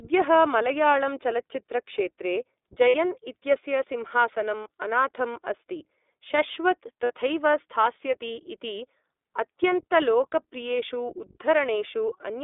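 The speech has been passed through the iLBC codec, a narrowband VoIP coder that handles each 20 ms frame on its own and rebuilds the excitation from a compact model. The band is held to roughly 300 Hz to 3.6 kHz, and the coding damage is plainly audible as a rough, slightly synthetic edge on the voice throughout, which fits the 15.2 kbps mode.

At 2.88 s, between "मलयाळम् चलच्चित्रक्षेत्रे" and "इत्यस्य सिंहासनम् अनाथम् अस्ति", lost iLBC frames leave a hole the decoder fills by repeating the last pitch cycle with noise, heard as a brief buzzy held vowel lasting about 60 ms, which points to three missing frames. A shorter 20 ms patch follows at 4.64 s after "इत्यस्य सिंहासनम्". Another 60 ms patch comes at 7.04 s before "स्थास्यति इति". Each time the voice recovers almost immediately.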